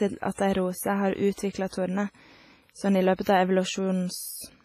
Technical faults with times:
0.00-4.64 WMA compression
1.33-1.38 pre-echo

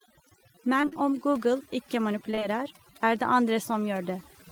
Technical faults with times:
0.00-4.51 overdone noise removal
0.81-0.97 repeated packet loss (robotic sound)
2.31-2.43 short concealed packet loss

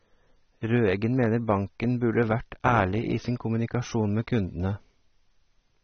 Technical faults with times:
0.00-5.83 AAC compression

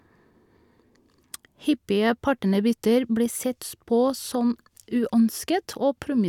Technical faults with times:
none

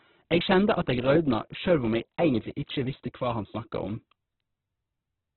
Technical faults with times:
0.00-5.37 Opus compression

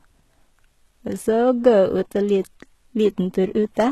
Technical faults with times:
0.00-3.92 HE-AAC compression

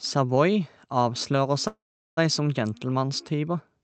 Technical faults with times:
1.67-2.19 call audio freeze

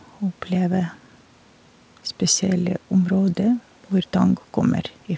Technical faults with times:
none

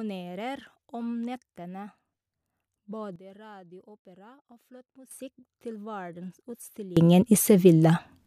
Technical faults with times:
3.16-5.11 sudden gain jump
6.97-8.27 sudden gain jump

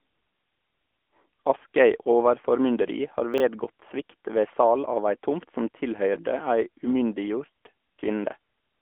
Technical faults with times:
0.00-8.81 AMR narrowband mobile codec
3.34-3.40 chunks out of order

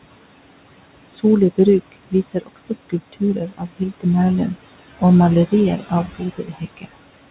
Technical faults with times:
0.00-7.30 noise suppressor artifacts
1.07-1.25 speech cut by the noise suppressor
2.11-4.05 speech cut by the noise suppressor
5.78-6.86 speech cut by the noise suppressor

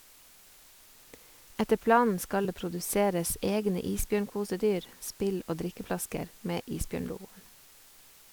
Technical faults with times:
0.00-8.32 low bit depth with dither
2.41-2.45 damaged data in a compressed stream

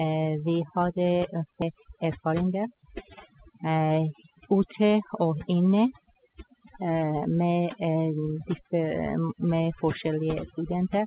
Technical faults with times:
0.00-11.07 overdone noise removal
1.62 skip ahead
1.74-2.83 jitter buffer speed-up

